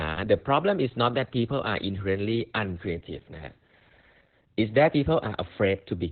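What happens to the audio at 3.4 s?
At 3.4 s you're hearing the same Opus voice compression that runs through the whole clip, so nothing new kicks in there. The codec is squeezing the speech through its SILK linear-prediction coder in narrowband mode, chopping everything above about 4 kHz and coding the excitation very coarsely. That's why it sounds muffled, hoarse and a bit robotic, which fits a bitrate of around 8 kbps.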